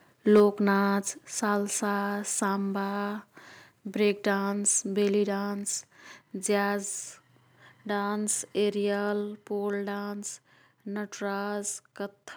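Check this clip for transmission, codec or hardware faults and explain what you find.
Two hardware-side faults show up, both at the very start of the speech.

Microphone overload, 0.35 to 0.42 s: the input gain was likely set too high, driving peaks about 3 dB past the converter's ceiling so roughly 7 percent of samples are flattened. The loudest syllable picks up a harsh, crackly edge.

Microphone volume stepped down, at 0.4 s: reacting to that clipped peak, the software probably cut the device's input gain in a single move of about 2 dB. Voice and background together drop suddenly to a slightly quieter level.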